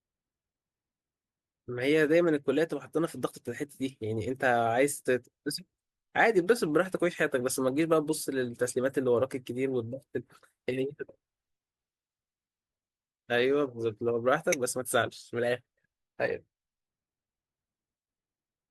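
At 14.52 to 14.55 s the speech gets a short glitch, a corrupt frame decoded. A couple of compressed frames arrived with flipped bits and the decoder played them anyway, putting energy at wrong frequencies. It's fairly loud too, peaking around -10 dBFS.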